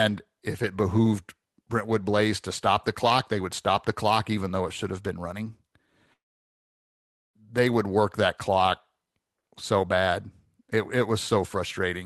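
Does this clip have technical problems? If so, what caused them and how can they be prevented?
Yes. A long network dropout runs from 6.13 to 7.36 s, between "should have been running" and "they would work that". The speech cuts off and a brief fading buzz carries on, leaving about 1.15 s of near silence before the audio resumes with roughly 1.2 s of speech missing. The likely cause is a stall in packet delivery, during which the receiver concealed the gap and then skipped past it. A more stable connection or redundant transmission would prevent it.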